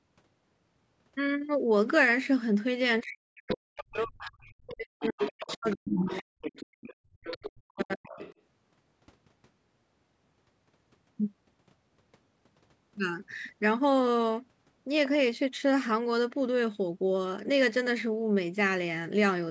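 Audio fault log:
3.03 to 6.43 s and 7.56 to 8.2 s, speech suppressed in double talk. The talker's speech dips by roughly 40 dB in pieces, likely because the echo canceller confused overlapping talk with echo.
3.48 to 8.34 s, other side's voice leaking through. A second voice comes through about 10 dB below the talker, likely echo the canceller failed to remove.
6.71 to 7.23 s, background gated by the echo canceller. The room sound drops by about 37 dB for a brief moment, then returns when the canceller releases.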